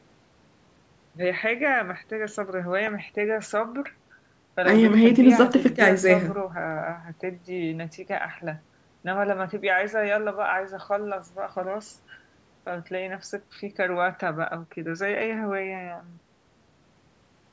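Speech with no audible faults.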